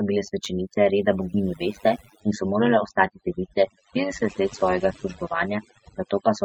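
A noise reduction stage was set far too strong, so overdone noise removal runs throughout, leaving near-silent gaps with twinkling specks. Frames were also rejoined with an overlap that doesn't sum to constant gain, and the resulting overlap-add ripple pulses the level by about 11 dB at around 100 Hz, a metallic buzz with extra tones around each note. From 2.2 s to the end, the adaptive stream switched to a lower-bitrate version, with nothing above 8.3 kHz and a sound that points to about 32 kbit/s MP3. The treble suddenly drops and codec artefacts thicken, with no gap.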